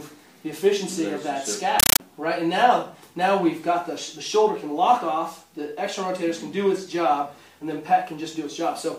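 From 1.80 s to 2.00 s the sound is replaced by very loud, chattering static: a compressed stream played as audio. A Dolby Digital bitstream has been treated as ordinary samples instead of being decoded, which fits a 448 kbps AC-3 stream. Unlike random digital noise or a bad connection, the static has a steady rhythm, with bursts of about 9.3 ms separated by silent zero padding and repeating 31.25 times a second.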